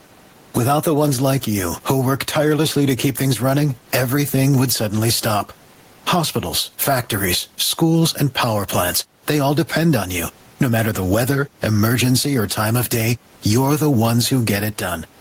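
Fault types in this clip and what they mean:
Gain pumping: the level ducks by about 15 dB under loud speech, likely from excessive input gain hitting a fast limiter.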